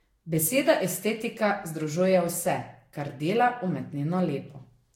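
Throughout the speech, the sound is swirly, smeared and hollow, with blurred consonant attacks, a pattern of generation loss. The likely cause is repeated lossy re-encoding, which fits about five Vorbis passes near 60 kbit/s. Each pass requantises on a shifted frame grid, so noise and spectral gaps accumulate. A spectrogram would show a hard ceiling at 16.6 kHz, patchy holes between harmonics, and onsets smeared across time.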